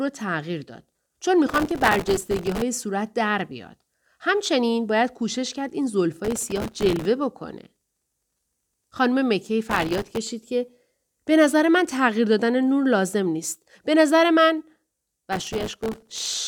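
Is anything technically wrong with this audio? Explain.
Yes. Processor overload crackle occurs in four bursts: 1.49 to 2.62 s, 6.25 to 7.05 s, 9.70 to 10.17 s, and 15.33 to 16.37 s. The processor repeatedly misses deadlines on very short buffers, around 1.5 ms each. Each miss replays stale audio with hard edges. Dozens to over a hundred misses in succession produce a gritty tearing crackle over the speech that stops when the load eases.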